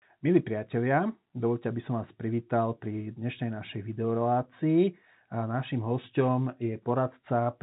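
No faults in this speech.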